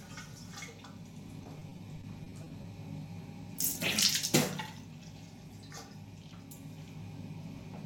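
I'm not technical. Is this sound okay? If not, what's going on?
No. From 1.43 to 2.66 s the sound turns choppy and robotic. This is repeated packet loss: about a dozen tiny dropouts, each patched by stretching the previous sound.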